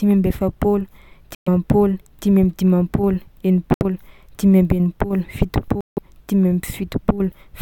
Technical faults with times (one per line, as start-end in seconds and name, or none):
1.35-1.48 Bluetooth dropout
3.74-3.83 Bluetooth dropout
5.81-5.98 Bluetooth dropout